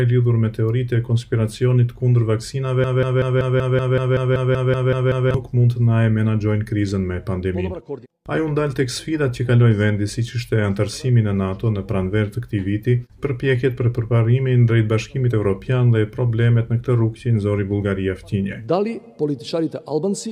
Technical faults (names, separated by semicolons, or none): broken-record loop